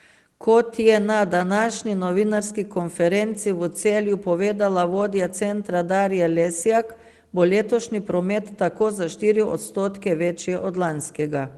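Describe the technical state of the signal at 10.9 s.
At 10.9 s the speech is intact, with no dropout, distortion or other fault, and it carries only the ordinary coding character of the Opus call path it passed through.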